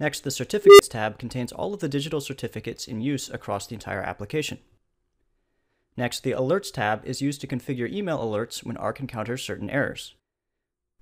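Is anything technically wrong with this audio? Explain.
Yes. From 0.64 to 0.80 s there is an unstable filter. A recursive filter stage ran with coefficients that pushed it past the edge of stability, so each pass fed back more energy than it lost and its output climbed without limit. Over about 154 ms a tone near 400 Hz swells into a loud, clipped squeal. Then the values overflow and the sound cuts out for 2.9 ms until the filter resets.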